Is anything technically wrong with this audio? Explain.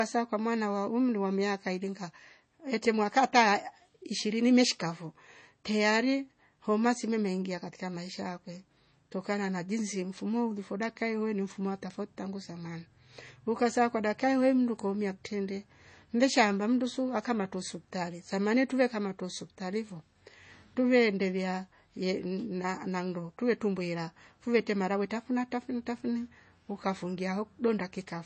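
Yes. Throughout the speech there is likely MP3 compression at a low bitrate, which fits about 32 kbps. Starved of bits, the encoder removes everything above 8.3 kHz and drops weak frequency components frame by frame, so the speech sounds dull, watery and swirly, with smeared consonant attacks.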